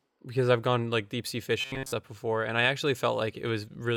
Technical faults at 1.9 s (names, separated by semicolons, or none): robotic sound from repeated short buffers